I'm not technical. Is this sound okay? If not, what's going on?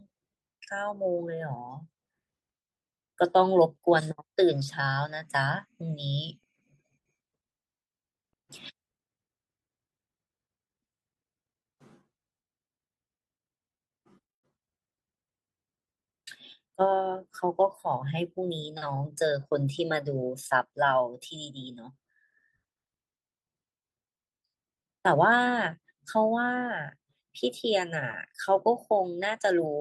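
Yes, this speech sounds fine; nothing is wrong here.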